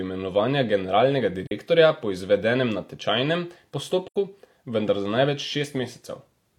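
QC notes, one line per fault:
1.47–1.52 s: AAC frame loss with muting. The speech drops into a short, soft-edged gap of about 43 ms, which fits one lost frame. The decoder zeroed that frame's spectrum, and the overlapping windows fade the sound out and back in.
4.06–4.16 s: AAC frame loss with muting. A longer hole of about 85 ms, consistent with two consecutive lost frames. The same zeroed spectrum and windowed fades make a smooth dropout rather than a hard cut.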